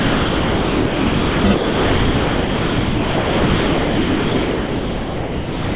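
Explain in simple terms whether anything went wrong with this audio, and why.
Yes. The sound was likely dropped by the voice detector, which treated it as background and stopped sending. Steady comfort noise replaces it from 0 to 1.44 s and from 1.54 s to the end, leaving only a brief moment of real sound.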